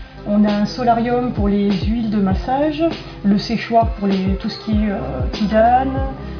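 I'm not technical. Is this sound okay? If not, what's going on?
Yes, it sounds fine; nothing here needs fixing.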